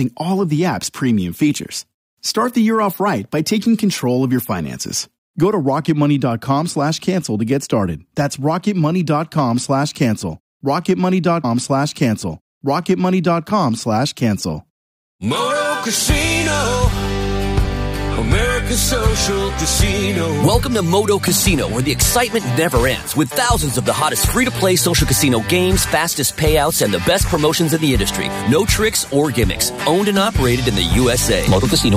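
At 11.43 s the audio jumps back with a small blip and plays roughly two seconds of material a second time, running until 13.44 s. This is a stream segment repeated: the player fetched or queued the same segment twice, adding about 2.0 s.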